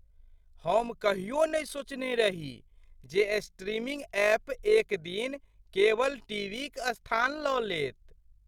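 Throughout the speech, overlap-add ripple: frames were rejoined with mismatched overlap, so level pulses about 6 dB around 50 times a second, a rough robotic flutter.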